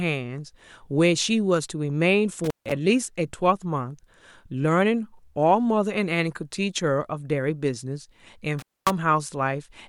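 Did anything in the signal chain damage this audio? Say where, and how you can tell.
Yes: the speech drops out with crackly edges at 2.44–2.72 s and 8.59–8.90 s, an intermittent contact in the analogue wiring briefly opening the line.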